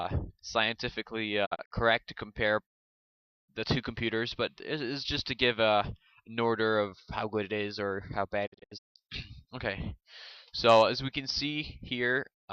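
At 1.45 s and 8.45 s, a digital broadcast dropout mutes the sound as valid frames stop arriving: short holes totalling 120 ms over 240 ms, then 336 ms over 480 ms, the longest 168 ms. Each 20 ms fade reaches clean silence, not the hiss of an analogue fade.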